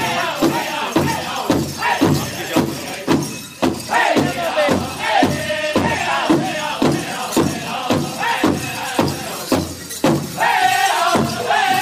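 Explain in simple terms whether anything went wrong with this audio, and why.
Something did go wrong: there's a USB whine from about 2.12 s to 7.28 s. It's a thin, steady tone at 1 kHz, sitting faint underneath the audio. What's happening is that the USB connection pulls power in regular one-millisecond bursts, and that rhythm leaks into the audio through the power or ground wiring. Because the bursts repeat a thousand times a second, you hear them as a fixed-pitch whine.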